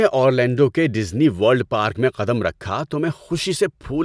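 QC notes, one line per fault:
No faults found.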